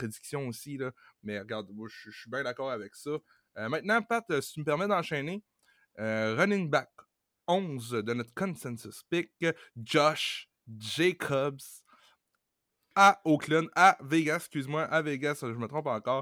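Listening closely to the speech, nothing stood out as a technical problem at any point.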